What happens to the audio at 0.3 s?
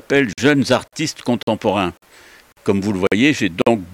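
At 0.33 s the sound drops out for about 48 ms, resuming at 0.38 s. This is a gap between chunks: the audio was delivered in pieces roughly 0.5 s long, and silence was inserted at a join instead of the next piece following straight on. Nothing is removed, only pushed later, so it is heard as a brief, hard-edged hole. On a waveform it shows as a flat line with abrupt ends; on a spectrogram, as a narrow empty vertical band.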